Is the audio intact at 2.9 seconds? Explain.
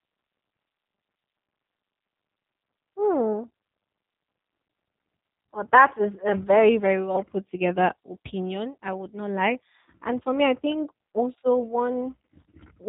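No, at 2.9 s the speech carries G.729 codec damage, present across the whole clip. The sound is rebuilt from a vocal-tract filter, pitch predictor and sparse pulses, which fits an 8 kbit/s stream, so it is rough and synthetic. A spectrogram shows a hard ceiling at 4 kHz.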